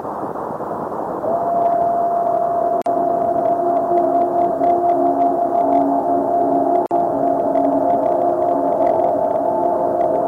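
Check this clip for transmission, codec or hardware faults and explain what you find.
Two brief dropouts interrupt the sound, both a gap at a join of encoded pieces. At 2.82 to 2.86 s and again at 6.86 to 6.91 s, about 4 s apart, the sound drops out for 45 ms and then 49 ms, with smeared edges, and resumes where it left off. Separately encoded segments were joined untrimmed, leaving each encoder's start-up delay and final-frame padding as silence.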